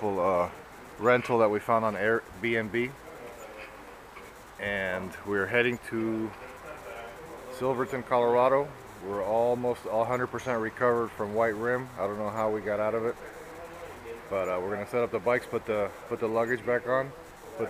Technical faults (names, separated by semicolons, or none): none